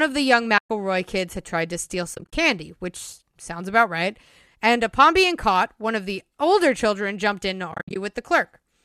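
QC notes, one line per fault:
0.58–0.70 s: AAC frame loss with muting. Right after "of the young" the sound drops into a soft-edged gap of about 120 ms before "kids had tried to" resumes. The decoder zeroed the spectrum of the missing frames, and the overlapping transform windows fade the signal down and back up instead of cutting it, giving a smooth dip to silence.
2.15–2.33 s: AAC frame loss with muting. After "had tried to steal" the lost material, about 120 ms in total, is spread across roughly 180 ms as several short dropouts, the longest around 30 ms, before "which sounds about right". Each muted stretch is faded in and out by the window overlap, so the sound flutters.
7.72–7.96 s: AAC frame loss with muting. Following "children jumped in to" about 180 ms of audio is muted across a span of roughly 240 ms, with the longest continuous gap around 70 ms. The zeroed frames give broken, soft-edged holes, faded at each boundary by the overlapping windows.
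Throughout: the speech carries light low-delay AAC compression, likely AAC-ELD at 64 kbps, with only mild coding texture.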